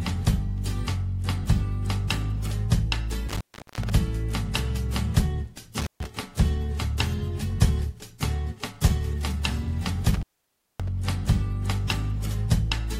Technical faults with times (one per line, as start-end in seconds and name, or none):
3.29-3.90 intermittent contact
5.80-6.06 intermittent contact
10.14-10.88 intermittent contact